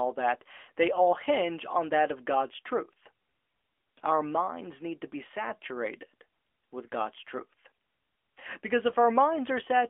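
Throughout, AMR narrowband mobile codec damage is plain: the spectrogram stops sharply at 300 Hz and 3.4 kHz, and the synthetic texture suggests roughly 10.2 kbps.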